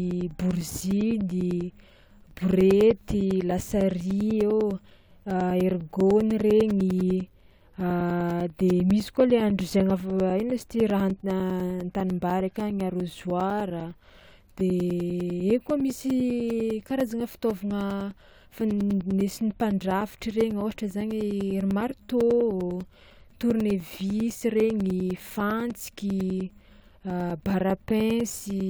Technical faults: periodic USB or driver dropouts

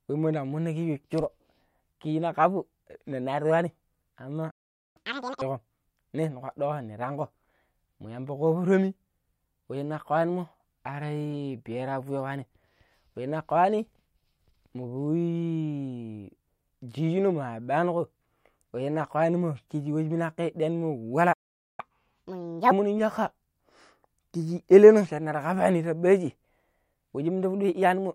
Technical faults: playback stall; catch-up at higher speed

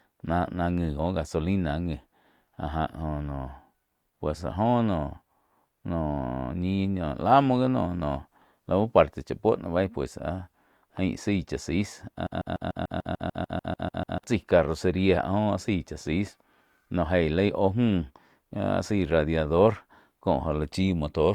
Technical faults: broken-record loop

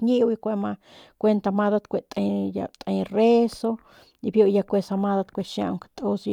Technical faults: none

